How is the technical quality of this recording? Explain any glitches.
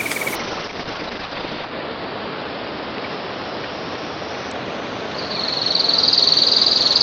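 The technical quality is poor for almost the entire clip because of a call bitrate drop. From 0.36 s to the end, the encoder's bit budget collapses, which fits a fall from about 32 kbps to 7 kbps. Everything is coded more coarsely, and the bandwidth narrows from 20 kHz to 6 kHz. The sound turns rough and muffled, at its worst for 1.37 s. On a spectrogram, energy above 6 kHz vanishes.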